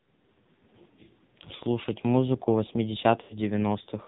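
Speech heard through the AMR narrowband mobile codec, heavily damaged: nothing passes above 4 kHz, and the voice is buzzy and synthetic, which fits a low rate of about 5.9 kbit/s. A plain low-pass filter would only muffle the sound, but this codec rebuilds the voice from a vocal-tract model fed with sparse pulses, so the texture itself turns artificial. Lost AMR speech frames occur from 1.56 to 1.62 s (40 ms, fitting two lost 20 ms frames) and from 3.22 to 3.37 s (80 ms, fitting four). These gaps are not clean dropouts to silence. The decoder repeats its last pitch and vocal-tract settings at falling gain, so each gap sounds like a smeared warble that fades before the voice returns weak or rough for a moment.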